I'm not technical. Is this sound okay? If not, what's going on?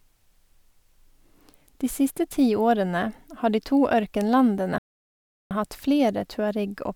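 No. A playback stall hits at 4.78 s: the speech cuts out into silence for about 0.73 s, then resumes at 5.51 s just before "hatt flere". The likely cause is the player briefly running out of audio data, or getting held up, so nothing came out until it caught up.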